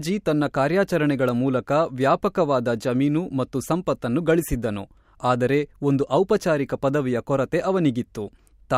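A speech recording with a single loud pop at 4.52 to 4.56 s, just after "ವ್ಯಾಪಕವಾದ ಜಮೀನು ಮತ್ತು ಸಂಪತ್ತನ್ನು". The pop is a sharp transient lasting about 40 ms. It peaks roughly 5 dB above the surrounding speech, and the speech carries on beneath it. The sound is typical of a brief voltage pulse entering the signal path and being shaped by the downstream circuitry. The likely cause is a connector or switch disturbance, a static discharge, or a driver glitch.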